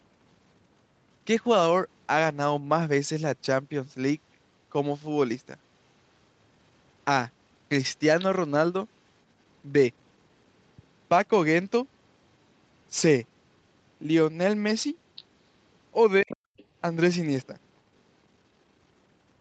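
An echo canceller that likely left part of the far end's loudspeaker signal in the microphone lets the other side's voice leak through as brief, quiet scraps at 8.19–8.24 s and 15.16–15.24 s, well below the talker. At 16.22–16.31 s both sides were talking at once, and the canceller likely could not separate them and turned everything down. The result is speech suppressed in double talk, a sudden drop of around 30 dB lasting about a tenth of a second. Overlapping its end, at 16.29–16.37 s, the leaked voice returns more noticeably, and it surfaces once more, very faintly, at 16.57–16.64 s.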